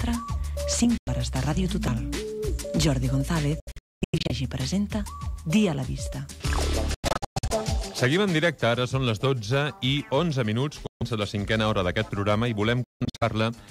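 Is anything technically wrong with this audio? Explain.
Yes. A Bluetooth dropout, heard five times: 0.98–1.08 s, 3.60–4.31 s, 6.94–7.51 s, 10.87–11.03 s and 12.84–13.23 s. The likely cause is audio packets missing their deadline to the headphones and being discarded, so output goes silent until good data returns. Each hole has abrupt edges or a fade of a few milliseconds, and the sound resumes further along, as if it had kept playing. The second, third and fifth are clusters of short gaps rather than one continuous silence.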